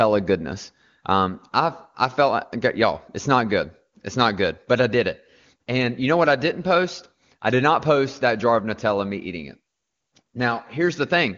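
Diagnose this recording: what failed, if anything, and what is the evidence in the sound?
Nothing failed: the speech comes through an AMR wideband (HD Voice) path whose band stops near 7 kHz and which sounds clear rather than rough, pointing to one of the codec's upper rates.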